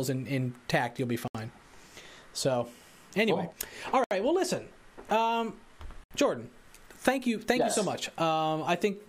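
Short holes at 1.28, 4.04 and 6.04 s, each a block of digital silence about 70 ms long where samples were replaced by zeros.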